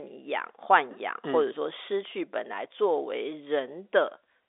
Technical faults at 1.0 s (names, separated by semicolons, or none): none